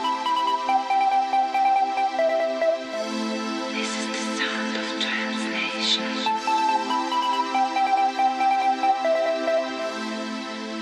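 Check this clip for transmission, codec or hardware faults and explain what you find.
Nothing in this clip points to a fault.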